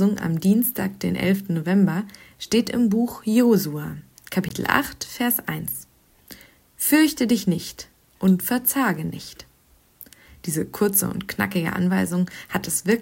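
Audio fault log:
4.49 s, block of digital silence: a brief cut lasting about 20 ms, heard as a tick, a pop or a short hole. For that moment the sound cuts out and then returns with no fade on either edge. A run of zeros this short most likely means the output buffer wasn't filled in time.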